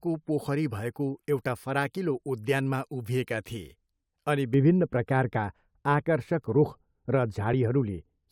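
Speech, with de-emphasis applied wrongly from 4.54 s to the end, right after "उद्यानमा उभिएका थिए अनि". From that point the sound turns dull and muffled. The treble rolls off in a smooth slope, not a sharp cut. At 10 kHz it sits about 11 dB below the level at 1 kHz. A filter meant to undo pre-emphasis has been run on audio that never had any, or has been run a second time.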